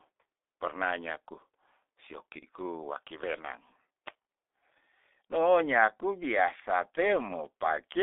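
Throughout, the speech runs through the G.723.1 codec. Its 30 ms frames and heavy compression fit a rate of about 6 kbit/s. Only 300 Hz to 3.6 kHz survives, so the voice sounds muffled and hoarse, with smeared consonants.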